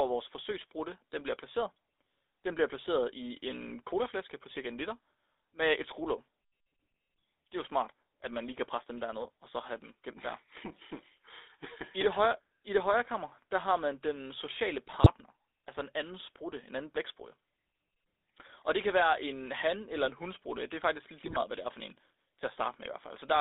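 A buzzy, gravelly roughness runs through the whole recording, with the sound squeezed into a narrow band between roughly 300 Hz and 3.7 kHz and nothing bright above it. This is the GSM full-rate codec at work, and the plainly audible damage fits its 13 kbps coding. It models the vocal tract and excites it with a coarse, regularly spaced pulse train, so fine detail in the excitation is thrown away.

At 9.22 s a brief squawk lasts about 40 ms, just before "og så have dem". A longer burst of gargling and popping follows at 14.87 to 15.09 s, between "har man den sociale" and "altså en anden sprutte". A third hits at 21.24 to 21.39 s, after "er faktisk lidt" and before "hvad det er for". These are GSM bit errors. Corrupted filter, pitch or gain values reached the decoder, which then bent the spectrum and jolted the level frame by frame.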